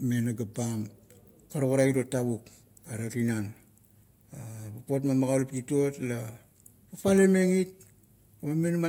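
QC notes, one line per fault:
No faults found in this speech recording.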